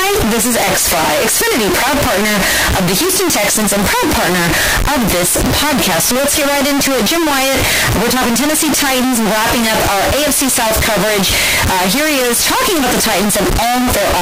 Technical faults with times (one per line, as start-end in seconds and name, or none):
0.00-14.21 float read as integer